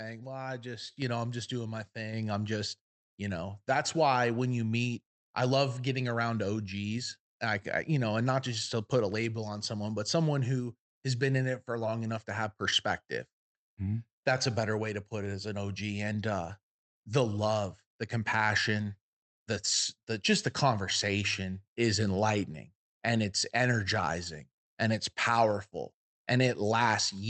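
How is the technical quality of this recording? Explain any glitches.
The recording has two abrupt jumps in level early on, both from the microphone volume being stepped up. At 1.02 s and again at 2.13 s, the call software judged the input too quiet and raised the device's microphone gain in single steps, by about 6 dB and then about 3 dB. Speech and background noise both get suddenly louder together, rather than rising smoothly. The high-frequency content stops around 8 kHz, consistent with the Opus codec on the call path.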